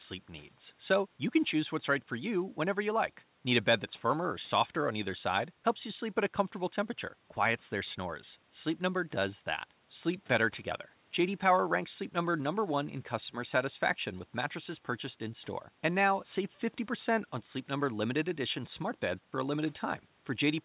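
Careful listening turns up nothing that stands out as a technical fault in this speech, which carries the narrow call-band sound expected from a telephone-grade codec with nothing audible above about 4 kHz.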